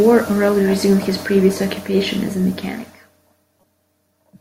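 A brief chirp-like burst of noise at 3.61 to 3.64 s is a corrupt frame decoded: flipped bits in a handful of compressed frames were played anyway, misplacing energy across frequencies.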